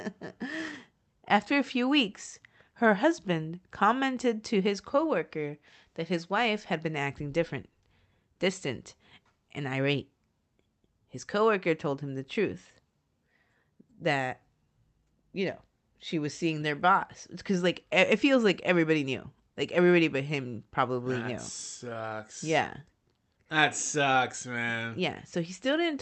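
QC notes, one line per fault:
No fault is heard anywhere in this speech clip. The sound has come through a call codec, and the top end stops at around 8 kHz, as that codec's bandwidth setting would have it.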